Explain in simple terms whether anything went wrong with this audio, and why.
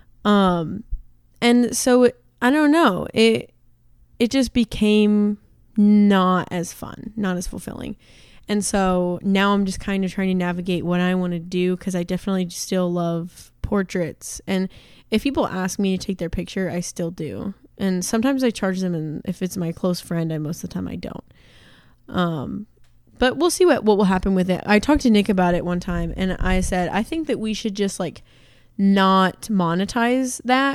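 Nothing went wrong here: the speech recording shows no audible technical faults at any point.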